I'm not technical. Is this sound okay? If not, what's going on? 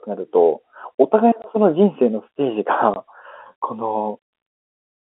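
No. There is packet loss filled with silence at 1.42 to 1.44 s and again at 2.94 to 2.96 s. Each time a 20 ms piece of the speech never arrived, fitting one lost packet, and the player put silence there, so the sound drops out with a hard edge on each side.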